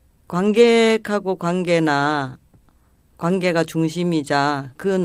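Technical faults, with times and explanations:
0.45–0.63 s, lost packets rebuilt from error correction: there is no dropout, but the speech turns rougher and noisier for this stretch. The missing packets were replaced by the low-bitrate backup copies carried in the packets that followed, so the decoder filled the hole with a coarse version of the sound. The degraded span fits a run of about five packets. A waveform shows no silence or break. On a spectrogram, harmonics look smeared and grainy, with a diffuse noise floor between them.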